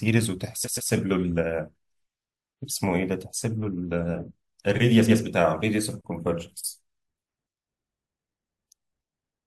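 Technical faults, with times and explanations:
0.64–0.90 s, repeated frames: a short stutter, with the same 128 ms slice of speech heard three times in a row. A run of compressed frames, which fits a block of about three frames, was written or sent more than once, so the decoder played it again twice. That doubling-back stretches the audio by 256 ms.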